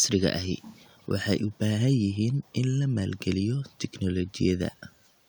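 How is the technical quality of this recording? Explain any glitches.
The recording has one glitch, early in the speech. An echo leak runs from 0.61 to 1.09 s. A faint delayed copy of the speech trails the original by about 221 ms, sitting far below the main level. The likely cause is a loudspeaker on one end of the call whose echo canceller failed to fully subtract what its microphone picked up, so that residue was sent back down the line. It sounds like a ghostly repeat just behind the talker.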